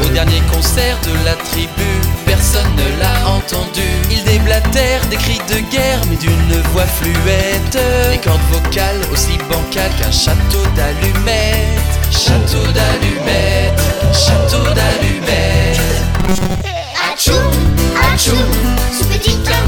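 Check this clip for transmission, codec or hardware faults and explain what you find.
One fault appears, between 16.20 and 16.61 s: robotic sound from repeated short buffers. New audio likely stopped arriving in time, so the playback software kept filling the gap by looping its last short chunk while the real material was skipped, for most of that stretch. The loop lasts about 5.3 ms, so the repeats impose a fixed 188 Hz buzz. The sound turns metallic and machine-like, roughly tracking its original shape.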